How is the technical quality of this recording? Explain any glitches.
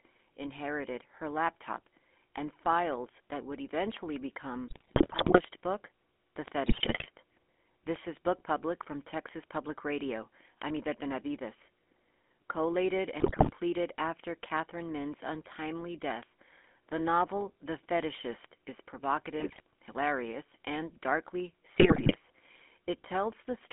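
The quality is poor: the whole recording went through a GSM full-rate codec, and several short bursts of GSM bit errors break up the speech.

GSM full-rate codec, throughout: the vocal tract is modelled and driven by coarse pulse excitation, which fits a 13 kbit/s coder. The speech sounds buzzy and gravelly, confined to roughly 250 Hz to 3.5 kHz.

GSM bit errors, at 4.68 to 5.41 s, 6.66 to 7.07 s, 13.2 to 13.51 s, 19.4 to 19.6 s and 21.78 to 22.13 s: corrupted filter, pitch and gain values warp each frame, so the speech squawks, pops and gargles.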